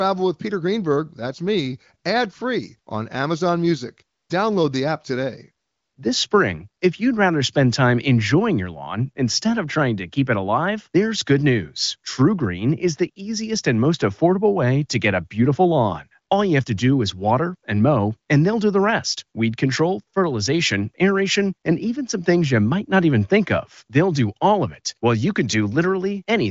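Nothing goes wrong anywhere in this speech recording, which carries the familiar HD Voice sound of the AMR wideband codec with its top end stopping at around 7.5 kHz.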